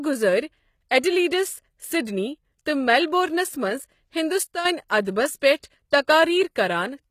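Throughout the speech, treble is rebuilt rather than original, with nothing above 14.9 kHz, likely from HE-AAC compression around 20 kbps; a spectrogram shows copied upper bands, and sibilants sound gritty. At 4.43 to 4.65 s, a sudden gain jump drops the level by about 9 dB, likely an unramped gain change, seen as a step in the waveform envelope. Pre-echo appears at 4.88 s (17 ms), 5.58 to 5.64 s (51 ms) and 5.91 s (19 ms): codec noise smeared ahead of attacks, showing as a short hiss before each onset.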